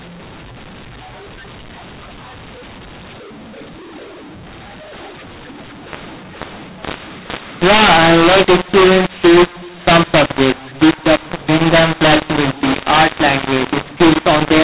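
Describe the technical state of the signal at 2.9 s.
At 2.9 s the speech carries a mu-law and A-law mix-up that runs through the whole clip: samples coded with A-law are being expanded as mu-law, so each level lands on the wrong step of the logarithmic curve. The result sounds harsh and gritty, with quiet passages lifted into hiss. On the waveform, peaks look uneven and the near-silent stretches sit visibly above zero. On the spectrogram, broadband distortion fills the gaps, all under a ceiling near 4 kHz that fits G.711 telephone sampling.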